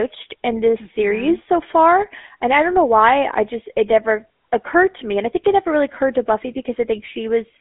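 Throughout the speech, a GSM full-rate codec imposes a buzzy, gravelly roughness, consistent with its 13 kbps rate, inside a narrow 250 Hz to 3.6 kHz band. Unlike simple band-limiting, which only dulls the sound, the regular-pulse excitation adds coarse, rasping grain.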